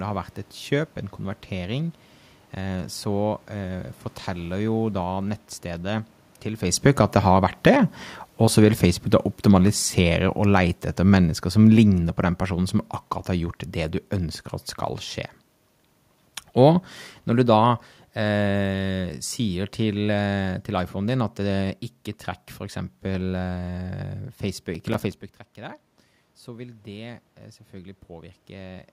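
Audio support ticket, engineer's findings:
Automatic gain falling, 6.7 to 14.4 s. Speech and room noise sink together by about 9 dB over nearly eight seconds. Component: AGC. Just before, around 6.5 s, the talker moves. The AGC reads the input as too hot and pulls its gain down slowly. Second automatic gain falling, 16.47 to 21.69 s. A further drop of about 5 dB, again with the background following the voice down. Same mechanism: gradual gain reduction, not a change at the source.

Processor overload crackle, 24.75 to 25.14 s. A short gritty tear over the speech, about ten tiny silent gaps with hard edges in quick succession. Component: audio processing thread or DSP. Deadlines are missed back to back, each gap fitting a buffer of around 5 ms. The crackle stops once the load passes.

Automatic gain rising, 25.55 to 28.88 s. Voice and room noise swell together by about 5 dB over roughly three seconds. 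Component: AGC. Around 25.0 s the talker moves back and the input falls by about 16 dB. The AGC reads the level as too quiet and raises gain slowly, recovering only part of the loss.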